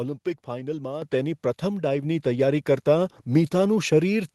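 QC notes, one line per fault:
1.02 s, microphone volume stepped up: the input gain jumps by about 7 dB in a single step, so the voice and the room noise behind it get louder together and stay there. The capture level was raised at the device, before any processing. On the waveform, the envelope widens abruptly at 1.02 s, with the noise floor between syllables also higher. The spectrogram shows a vertical brightness seam across all bands, including the call codec's band, which stops near 12 kHz.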